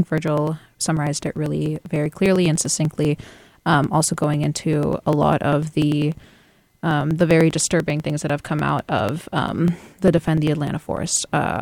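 Periodic USB or driver dropouts run through this speech clip from 0.08 s to 11.56 s. Every 0.099 s, roughly a millisecond of audio is skipped outright as something blocks the bus or driver, leaving evenly spaced ticks that sound only while there is signal.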